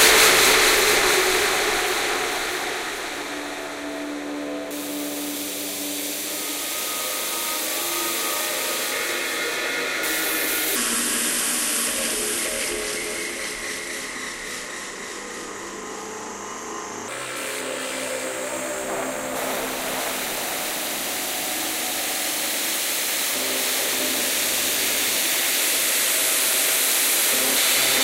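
Likely a mismatched playback clock leaves a section at the wrong speed from 10.76 to 17.08 s: 0.777 times normal, slower and about four semitones deeper.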